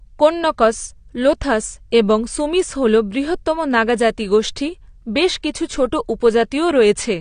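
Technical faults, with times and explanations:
Throughout, AAC compression: the speech sounds dull and smeared, with nothing above 9.7 kHz. The likely cause is low-bitrate AAC-LC, fitting about 32 kbps.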